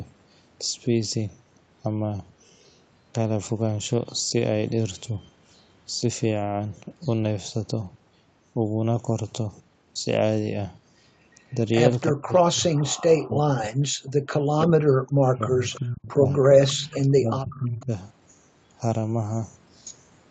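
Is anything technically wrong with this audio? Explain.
Yes, there are three kinds of echo-canceller fault.

Echo leak appears at 11.51–11.59 s, 12.97–13.02 s, 15.71–15.79 s, 16.43–16.99 s and 17.52–17.84 s. A faint delayed copy of the speech trails the original by 348 ms, likely because the far side's echo canceller let part of its loudspeaker pickup through and sent it back. The first scraps sit very low, but by 16.43–16.99 s the echo rises to only about 15 dB under the speech.

Speech suppressed in double talk occurs from 12.11 to 13.77 s and again from 14.38 to 17.91 s, while the echo is also present. The speech dips and drops out in pieces, falling by roughly 40 dB at its deepest, for about a second in the first stretch and around two seconds in the second. The likely cause is an echo canceller that could not separate the local talker from the loudspeaker echo, so it attenuated both together.

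Background gated by the echo canceller is a brief dip at 14.05–14.10 s. The room sound drops by about 14 dB for roughly 50 ms and then returns. The canceller clamped the microphone down while the loudspeaker was active and released it almost immediately, which leaves a short hole in the ambience. The whole clip is band-limited to 8 kHz, which is consistent with the Opus call path it went through.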